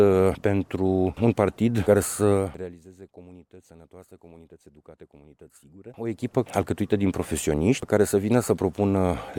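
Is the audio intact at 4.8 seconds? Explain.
Yes, the audio is intact at 4.8 seconds, with no audible fault at that moment.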